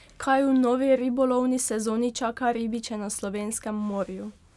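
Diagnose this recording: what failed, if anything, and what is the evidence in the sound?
Nothing stood out on listening to this speech recording that would point to a failure at any stage of the chain.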